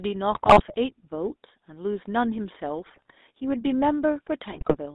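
Throughout, the speech has a buzzy, gravelly roughness confined to roughly 250 Hz to 3.7 kHz: GSM full-rate codec damage, from modelling the vocal tract and driving it with sparse, regularly spaced pulses. From 0.32 to 0.79 s, 2.86 to 3.13 s and 4.5 to 4.77 s, the sound breaks into squawks, pops and gargling. These are GSM bit errors, where corrupted filter, pitch or gain values distort the spectrum or level of individual frames.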